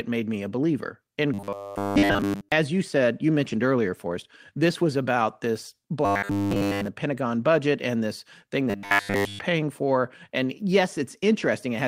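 Speech, with three stretches of robotic sound from repeated short buffers. From 1.34 to 2.52 s, just before "as you said you", the speech turns into a rigid, metallic buzz at 100 Hz. It still roughly tracks the words. Most of that stretch is repeated material. The same buzz returns from 6.05 to 6.87 s, after "this was about this", and from 8.70 to 9.39 s, after "budget and this thing". In those two stretches the repetition is total. The likely cause is audio arriving too seldom, so playback loops the last 10 ms over and over. That fixed loop length sets the 100 Hz pitch.

A separate fault, a lost packet rebuilt from error correction, sits between 3.45 and 3.55 s. There is no gap. About 60 ms of audio was rebuilt, which fits three lost packets. Each was restored from a low-bitrate copy carried in the following packet. Those rebuilt frames sound rougher and noisier than the speech around them.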